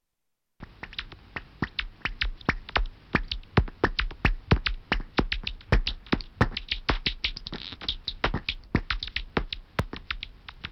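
From 7.80 s to 10.54 s the sound picks up a steady run of small ticks, about ten of them spaced 0.249 s apart, roughly four per second. These are periodic USB or driver dropouts. At each tick about a millisecond of audio is skipped outright, not filled with silence, so the waveform jumps and clicks. The strict spacing suggests a background task stalling the USB bus or audio driver on a fixed schedule.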